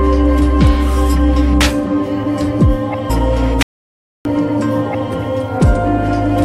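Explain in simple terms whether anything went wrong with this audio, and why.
Two things go wrong here. At 3.09 s the sound suddenly jumps ahead with a tiny blip. That's a stream segment skipped: a chunk of the stream most likely failed to load, so the player moved on to the next one and that stretch is simply missing.

Then from 3.63 s to 4.25 s the audio cuts to dead silence for about 0.63 s, with no background hiss at all. That's an audio dropout to silence. The input likely dropped out briefly and the recorder kept writing blank audio, so whatever happened in that gap is lost.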